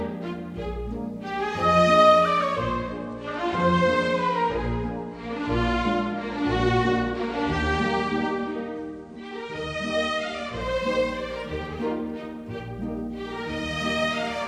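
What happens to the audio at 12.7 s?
Nothing goes wrong at 12.7 s; the audio plays through that moment intact, with no dropout, click, distortion or other fault.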